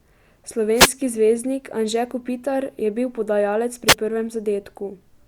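Speech with two wireless microphone noise hits, at 0.75–0.92 s and 3.87–3.95 s: brief static swishes as the FM radio link fades and receiver noise surges, showing as broadband vertical smears on a spectrogram.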